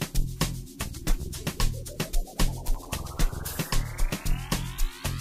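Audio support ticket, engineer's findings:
Processor overload crackle, 2.68–2.86 s. Gritty burst of crackle riding on the sound. CPU/audio thread missing buffer deadlines several times in a row. Each miss drops to silence with hard edges, in steps consistent with buffers of roughly 5 ms. Clears once load passes.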